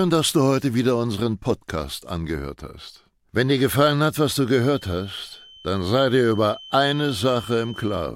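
From 4.49 s to the end of the speech clip, a thin steady tone near 3.1 kHz sits roughly 20 dB below the voice, swelling and fading slowly in level: a feedback whistle. The likely cause is a loudspeaker-to-microphone loop held just at the edge of feedback, so one frequency rings on without building up. Unlike a runaway howl, it never builds into a howl; unlike a fixed electrical hum or tone, its level drifts rather than staying constant.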